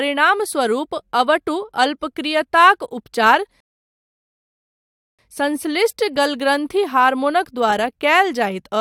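Rebuffering stall, 3.60 to 5.19 s: the player's downloaded audio ran dry, so speech halts in silence for 1.58 s, then picks up intact.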